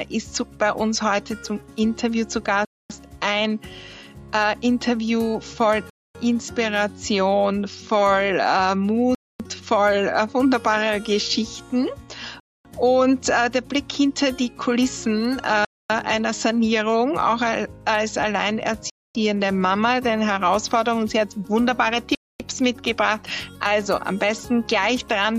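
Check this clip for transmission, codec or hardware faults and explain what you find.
The clip has one fault, a gap between chunks, repeated seven times. The audio was delivered in 3-second chunks, and each join received 250 ms of inserted silence rather than continuing seamlessly. This points to padding or a late start on each chunk. Nothing is lost, but the sound cuts out abruptly into hard-edged holes at 2.65, 5.90, 9.15, 12.40, 15.65, 18.90 and 22.15 s, one every 3.25 s in a steady, mechanical rhythm.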